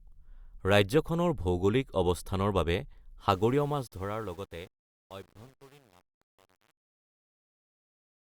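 Truncation distortion on a fade starts at 3.31 s, just after "ৰাজ্যখনৰ ভৌগোলিক অৱস্থানৰ বাবে", and runs to the end at 8.24 s. The fade-out begins around 3.3 seconds, but the stage applying it keeps too few bits and adds no dither, which fits an 8-bit path. As the level sinks, the waveform collapses into coarse steps. From 3.56 s onward the speech turns gritty.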